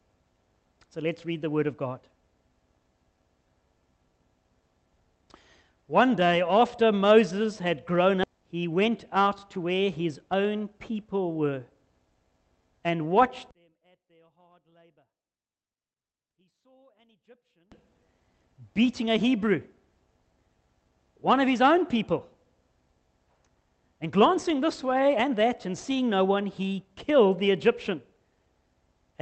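At 8.23 to 8.25 s about a second of audio was dropped that had already been overtaken by later packets, a skip ahead. Nothing fills the hole, so the sound jumps abruptly forward and the two sides are spliced almost directly, with part of the material simply gone.

From 8.87 to 9.79 s the jitter buffer, holding more than its target, performed a jitter buffer speed-up, trimming short pitch-period slices totalling around 50 ms. Playback runs at about 105% speed with unchanged pitch, so this stretch feels slightly rushed.

Between 13.51 and 17.72 s the level collapses by about 37 dB, leaving only a faint residue of the sound. The likely cause is one channel inverted: with one stereo side's polarity reversed, the shared centre content cancels on a mono sum and only the small inter-channel difference survives. Throughout, the Opus call path tops out near 8 kHz.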